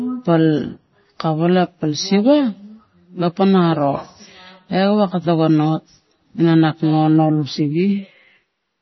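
From start to end, the speech carries heavy codec damage, likely from MP3 compression. Nothing sounds above 5.9 kHz. Weak frequency lines drop in and out between frames. That gives a watery, swirly texture, metallic chirps on s sounds and smeared attacks, which fits a bitrate near 24 kbps.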